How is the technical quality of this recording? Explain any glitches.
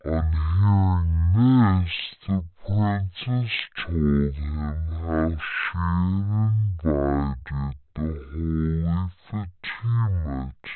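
The recording is playing back at the wrong sample rate, and it affects the whole clip. The speech runs at only about 0.36 of its proper speed and sits roughly 17.6 semitones low, nearly an octave and a half down. That fits audio captured at 44.1 kHz being played out at 16 kHz with no conversion, so timing and pitch drop together by the same ratio. The result is slow, deep and sludgy speech.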